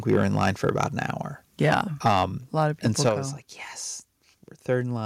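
From 0.09 to 0.87 s and from 1.6 to 2.23 s, the loudest syllables crackle harshly. This is likely microphone overload, with peaks driven about 6 and 7 dB past the converter's limit. On the waveform the peaks are sliced flat, and the spectrogram shows broadband smearing.

At 2.08 s, just before "a lot of people", the level drops suddenly by about 2 dB, likely the microphone volume stepped down by the call software. The waveform's height falls in one step there.

From 2.85 to 3.09 s the peaks flatten and crackle again, likely the same overload, about 4 dB over. At 3.09 s, right before "I was like yes", the level steps down by about 6 dB, likely another automatic cut to the input volume.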